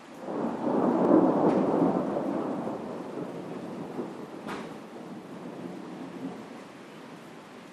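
At 1.05 s and again at 4.23 s, a single sharp click cuts through the sound. Both are likely dropped samples. A fraction of a millisecond is missing, so the waveform jumps abruptly. Nothing audible is lost, only the click remains.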